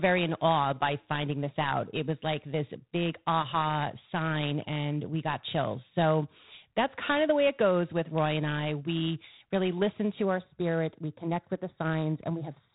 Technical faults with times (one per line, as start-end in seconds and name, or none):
0.00-12.75 G.726 ADPCM
10.25-12.75 channel delay (comb filtering)